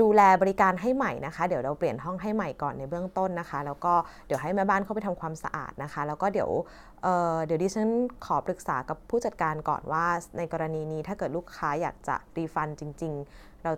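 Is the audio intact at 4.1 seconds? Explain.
Yes, the speech at 4.1 seconds plays through intact, with no dropout, click or other fault at that moment.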